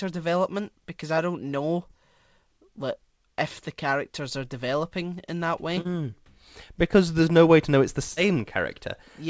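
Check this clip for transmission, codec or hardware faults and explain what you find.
Three short concealed packet losses interrupt the speech, at 1.88 to 1.91 s, 5.81 to 5.87 s and 8.13 to 8.18 s. In each, audio packets (about 20 ms of sound at the first point, 40 ms at the other two) arrived too late to decode. The receiver covered each gap by extending the preceding sound, pitched if voiced and as shaped noise if not, then blended back into the real signal. Each gap comes through as a brief smear or wobble, and a short consonant there can disappear. The speech is band-limited with nothing above 8 kHz, which fits a G.722 call codec at roughly 64 kbps.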